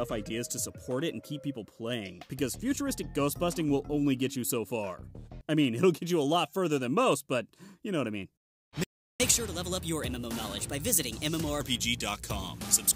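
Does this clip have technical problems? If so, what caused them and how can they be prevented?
Yes. At 8.84 s the player likely ran out of buffered data or had its audio thread blocked, so it had nothing to send to the output. That is a playback stall: the sound cuts off mid-flow and stays silent for about 360 ms, until 9.20 s, when output resumes. The gap is long enough to register as a clear break rather than a click. Keeping a deeper playback buffer and running audio on a high-priority thread that never waits on network or disk access prevents this.

From 9.20 s to 11.61 s the player drains the backlog built up during the stall by resampling it faster. This catch-up at higher speed runs the sound at 1.15 times normal speed, so for about two and a half seconds everything is both quicker and roughly two semitones sharp. It then drops back to normal speed and pitch. Absorbing lost time by dropping a few frames or by time-stretching that keeps pitch constant, rather than by plain speed-up resampling, prevents this.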